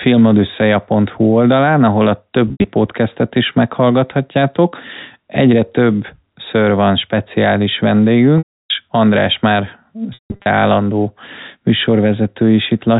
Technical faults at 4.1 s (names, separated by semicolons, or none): none